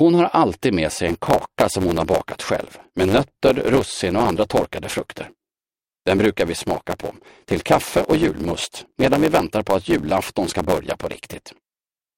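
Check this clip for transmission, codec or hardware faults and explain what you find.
One fault is present: a block size mismatch (truncated), from 1.04 s to the end of the clip. One stage hands over longer blocks than the next stage takes in. The tail of every block is dropped. Each cut leaves a small seam, so a buzz appears at 100 Hz, the block rate. The buzz fits 512-sample blocks being written. With part of every block lost, the audio runs about 1.07 times fast. The timbre stays.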